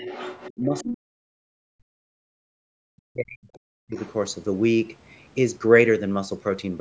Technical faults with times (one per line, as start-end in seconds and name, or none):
0.00-0.96 other side's voice leaking through
0.56-3.96 speech suppressed in double talk
3.95-4.12 other side's voice leaking through